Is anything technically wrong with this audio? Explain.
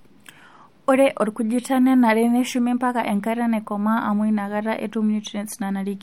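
No, nothing is technically wrong with this audio.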